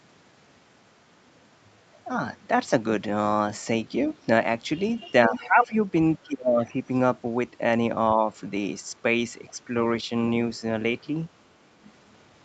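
Speech recorded on a call, where the echo canceller was likely not removing all of the far end's loudspeaker output from the microphone. The result is other side's voice leaking through as brief, faint scraps, roughly 15 to 30 dB below the talker, at 4.04 to 4.14 s, 5.33 to 5.39 s, 6.66 to 6.74 s and 11.84 to 11.92 s. When both sides talked at once, the same canceller likely could not separate its own talker from the echo and turned everything down. This is speech suppressed in double talk: the talker's level sinks by around 15 dB at 5.28 to 5.74 s, by a deep 25 dB or so at 6.25 to 6.77 s, and by only about 5 dB at 8.15 to 8.27 s.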